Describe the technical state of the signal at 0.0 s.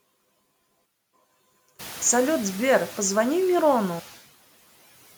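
At 0.0 s the speech carries noise suppressor artifacts, present across the whole clip. The suppressor pulls down bands it judges to be steady noise by about 15 dB frame by frame, so the residual noise drops between words and swells back under them. On a spectrogram the noise floor visibly darkens in pauses and fills in beneath speech.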